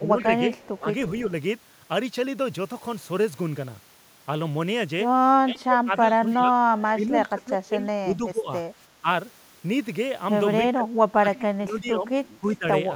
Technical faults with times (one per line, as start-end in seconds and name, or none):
0.00-0.17 speech suppressed in double talk
0.19-1.21 echo leak
0.73-1.30 speech suppressed in double talk
5.43-9.07 speech suppressed in double talk
10.74-12.66 speech suppressed in double talk